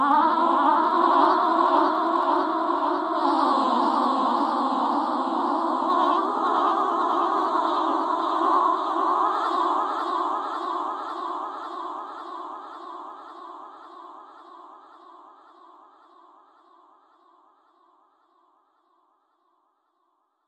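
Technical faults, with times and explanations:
0.12 to 20.47 s, clock slip clicks: a fast, soft rattle of single-sample ticks, around fifty a second and roughly a thousand in all, clearest on loud, bright or sustained passages. The likely cause is two devices running on unsynchronised clocks that differ by something like 0.1 percent, so the mismatch reaches a whole sample about every 20 ms and one sample is dropped or repeated, leaving a tiny discontinuity each time.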